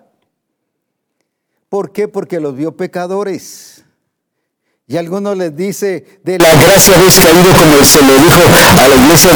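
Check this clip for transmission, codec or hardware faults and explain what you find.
One fault is present. From 6.4 s to the end, the speech becomes a very loud, harsh, near-square wave at an almost fixed, high level, with background noise as loud as the speech, though pitch remains traceable. The likely cause is float read as integer: 32-bit float samples are being decoded as 32-bit integers, so the sign and exponent bits set each value regardless of the original level.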